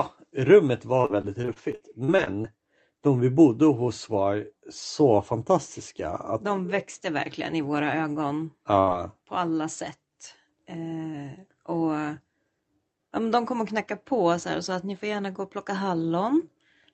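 From 1.01 to 2.46 s, just before "de vi bodde hos", repeated packet loss (robotic sound) chops the speech with about a dozen concealed gaps, the longest 52 ms, covering roughly a fifth of that stretch. It sounds choppy, with pieces missing. On a spectrogram, smeared, stretched frames alternate with normal ones, and the waveform shows a ragged envelope.

At 8.80 to 8.89 s, between "verkligen i våra ögon" and "på alla", a burst of packet loss drops about 80 ms. The last sound is held and faded. A spectrogram shows flat, frozen harmonics fading out, then an abrupt restart.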